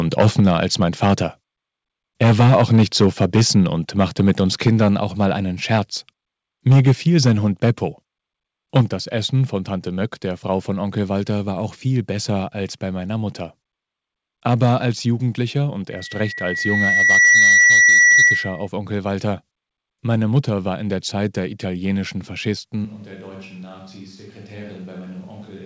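At 15.91 s a loudspeaker feedback squeal begins: a single tone near 1.9 kHz swells over roughly a second and a half until it sits around 10 dB above the speech, then holds until 18.68 s. The microphone is picking up the loudspeaker it feeds, and at that frequency the loop gain has passed unity, so the tone keeps reinforcing itself until the loop is broken.

From 22.85 s to the end, the speech abruptly turns roomy and hollow, loses low end, and falls by about 10 dB. Background room noise rises to roughly 25 dB below the speech. The sudden change is likely a switch to a distant microphone after the close microphone dropped out, leaving a pickup farther from the talker that hears more of the room. Throughout, the call path limits the audio to nothing above 8 kHz, which fits a wideband G.722 codec.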